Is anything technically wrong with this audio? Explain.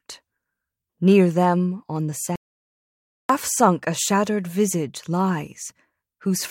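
Yes. From 2.36 to 3.29 s the speech hits an audio dropout to silence. The input was likely lost while zeros kept being written, leaving 0.94 s of dead silence. On the waveform it is a flat line, and on the spectrogram a fully blank band.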